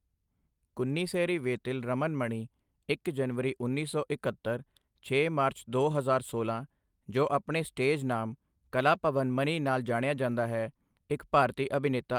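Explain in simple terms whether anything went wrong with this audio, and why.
Nothing went wrong with this speech recording, as there is no technical fault to report at any point in it.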